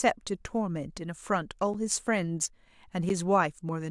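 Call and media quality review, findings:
Block of digital silence, 1.74 s: sound drops out for 8 ms, abrupt edges, heard as a tick. Probable component: output or render buffer not filled in time, so zeros went out in its place.

Block of digital silence, 3.09 s: identical 8 ms dropout, same abrupt edges. Matching length points to the same buffer-underrun path. Hole too short to register as a gap in the speech.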